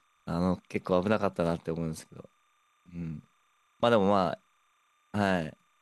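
Linear timecode from a neighbouring track or cable leaks into the speech path for the whole clip. This timecode bleed adds a faint, steady chirping warble switching near 1 and 2 kHz, fitting 30-frame code, roughly 40 dB below the speech.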